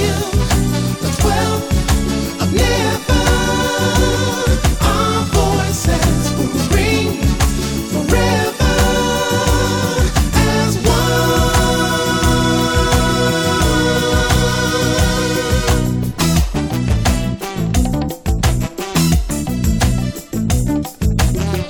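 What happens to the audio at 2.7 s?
Nothing goes wrong at 2.7 s, and the audio passes through that moment intact.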